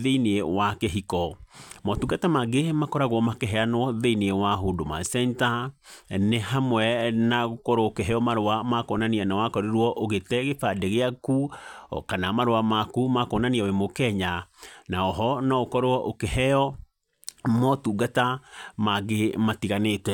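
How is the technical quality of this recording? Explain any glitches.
No technical glitches can be heard anywhere in the recording; the speech signal stays steady and intact throughout.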